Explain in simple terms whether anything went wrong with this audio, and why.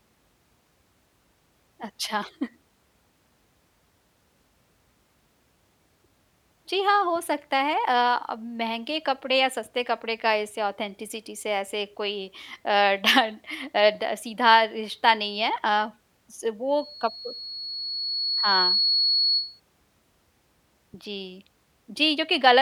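Loudspeaker feedback squeal at 16.77–19.6 s: a high tone near 4.4 kHz swells over roughly two seconds until it is about as loud as the speech. The microphone was picking up its own loudspeaker, and at that pitch the loop kept amplifying itself.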